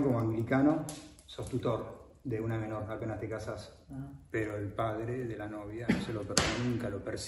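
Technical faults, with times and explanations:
throughout, resampler restarted on every block: a regular tick at 10 per second runs under the sound and is present only while there is signal. Each 100 ms block was converted separately, which fits a doubling from 24 kHz to 48 kHz, leaving a small error at every block edge.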